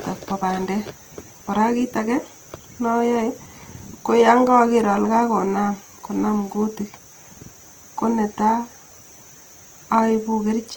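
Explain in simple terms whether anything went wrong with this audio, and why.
Throughout the speech, the sound is rough and grainy, with a noisy, gritty edge where it should be smooth. This is likely Opus compression: to save data, the encoder rebuilds detail it cannot afford from copied or noise-filled pieces, and that substitution is what you hear.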